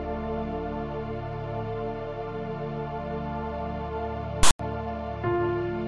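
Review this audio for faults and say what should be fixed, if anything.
At 4.43 to 4.59 s there's file tags played as audio: a text tag block is read as samples, giving a lopsided rasp, then dead silence from its zero padding. Have the decoder skip tag chunks rather than stream them as audio.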